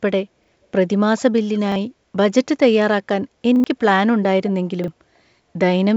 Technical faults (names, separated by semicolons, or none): repeated buffer